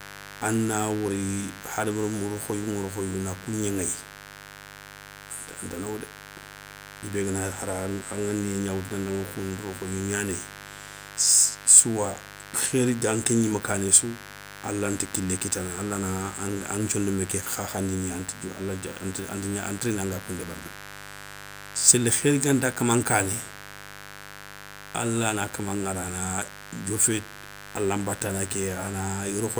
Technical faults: mains buzz

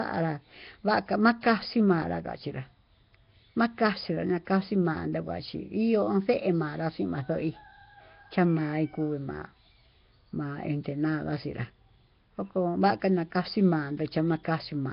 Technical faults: Nellymoser compression

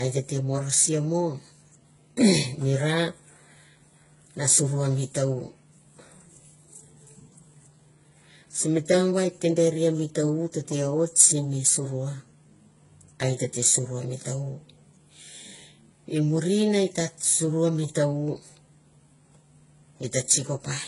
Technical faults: transcoding between lossy codecs

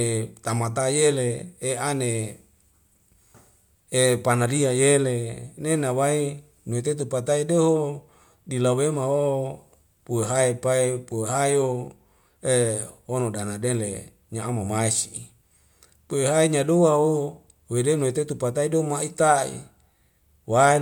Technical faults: none

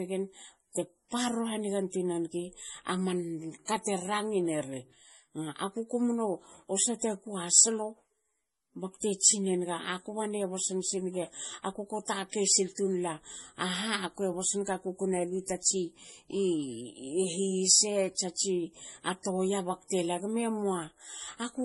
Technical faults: MP3 compression

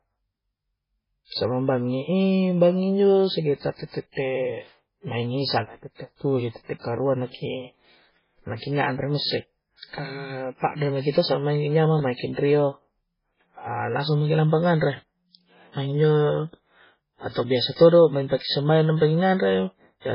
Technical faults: MP3 compression

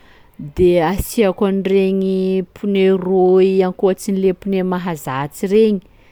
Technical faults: none

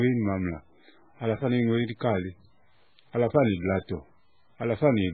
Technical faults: low bit depth without dither; MP3 compression

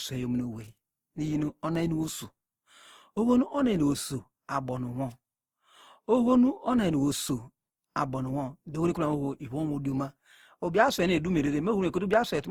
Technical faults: generation loss

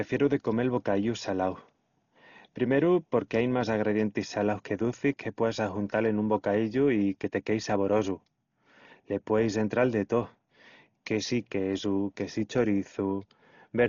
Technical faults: Dolby Digital compression

